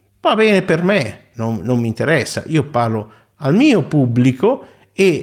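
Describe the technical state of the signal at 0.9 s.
At 0.9 s the signal is affected by clock drift between sender and receiver, present throughout the clip. The sender's clock runs roughly 3% slow, so the receiver's jitter buffer keeps draining. The result is small, irregular timing hiccups.

That moment also falls within repeated timing corrections spanning 0.04 to 4.95 s. To cover the shortfall, the receiver repeatedly duplicates short pieces, adding around 200 ms overall and playing at about 97% speed. Each edit is small, so any audible trace is at most a slight hiccup or an uneven tempo.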